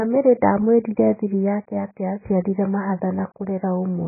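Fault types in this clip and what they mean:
AAC compression: The speech sounds dull and muffled throughout, with nothing above 2.5 kHz and heavy coding damage. This likely comes from AAC-LC encoding at a very low bitrate, around 12 kbps, where the encoder drops the high band entirely and quantises what remains coarsely.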